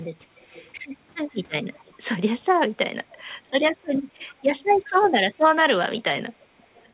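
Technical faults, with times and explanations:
0.35–0.71 s, 1.74–1.92 s, 3.09–3.51 s, 3.82–3.87 s, 4.18–4.88 s and 6.40–6.86 s: echo leak. A faint, delayed copy of the speech returns about 0.39 s late, roughly 25 to 40 dB below it. Likely cause: an echo canceller failing to fully remove loudspeaker pickup, heard within narrowband call audio with nothing above 4 kHz.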